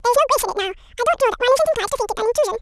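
From start to end, the speech plays as audio read two samples at a time (double speed): pairs of samples are taken as single frames, so it runs 2.0 times fast and an octave high. Unlike a plain sample-rate mismatch, samples are effectively discarded without filtering, so any strong content above a quarter of the sample rate folds back.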